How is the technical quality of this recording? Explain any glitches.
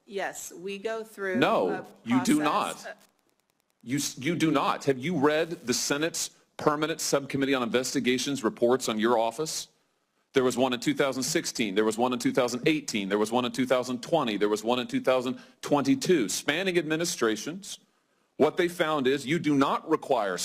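One interference fault affects the recording. From 1.48 to 6.07 s there is Wi-Fi interference: a nearby Wi-Fi radio's beacon, sent every 102.4 ms, is rectified by the audio circuit and heard as a steady, faint ticking about ten times a second, far below the main sound. Mobile-phone interference would instead produce a dense buzzing chatter with a rapid repetition rate, and mains hum would be a continuous low tone rather than separate ticks.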